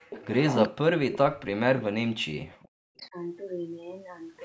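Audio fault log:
0.00–0.10 s, background gated by the echo canceller: the room sound drops out for about a tenth of a second, falling by about 40 dB. The canceller clamped the microphone hard while the far-end loudspeaker was active, then released it, leaving a brief hole.
0.10–0.26 s and 3.00–3.08 s, echo leak: a delayed copy of the audio arrives about 380 ms behind the original. At first it is roughly 15 dB under the speech, and later only a faint scrap far below it. The likely cause is a loudspeaker-side echo canceller not fully removing its microphone pickup.
0.66–3.16 s, speech suppressed in double talk: the talker's level dips over about two seconds in total, with drops as deep as roughly 40 dB. This is likely the canceller mistaking simultaneous talk from both ends for echo and attenuating everything.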